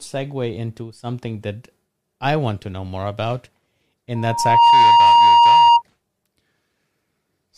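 At about 4.15 s a loudspeaker feedback squeal kicks in: a steady tone near 940 Hz swells up over roughly half a second until it sits well above the speech, something like 15 dB louder, and it keeps ringing until about 5.82 s. The mic is hearing the speaker it feeds, and at that one frequency the loop gain tipped past one, so the tone just fed on itself.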